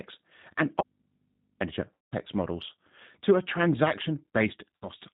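Throughout, the speech carries the sound of the G.729 codec at 8 kbit/s: a narrow band with nothing above 4 kHz, and a slightly rough, synthetic edge. The codec rebuilds each 10 ms frame from a vocal tract filter, a pitch predictor and a handful of pulses. That coarse model is what gives the plainly audible grain, a steady texture across the whole clip rather than something that comes and goes.

From 0.81 to 1.60 s the sound is replaced by an audio dropout to a faint residue. For about 0.8 s only a low mains hum remains, roughly 50 dB below the speech. The break is abrupt at both ends, not a pause or a fade. Because the hum persists, the input most likely stayed open while the signal feeding it was lost, unlike a muted path, which would go truly silent.

From 1.94 to 2.15 s comes VoIP packet loss concealed by the speech codec. About 180 ms of audio is missing, which fits six lost packets of 30 ms each. 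The decoder fills the gap by extending its last pitch and filter with falling gain, so the sound smears into a fading buzzy tone or coloured noise, not hum or silence. The speech stays weak for a moment after it resumes. The same concealment recurs, briefer, from 4.76 to 4.88 s, covering about 60 ms.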